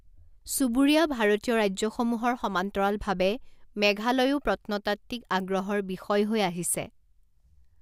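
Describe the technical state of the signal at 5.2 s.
At 5.2 s the speech signal is intact, with no audible dropout, clipping, distortion or other technical fault at that moment.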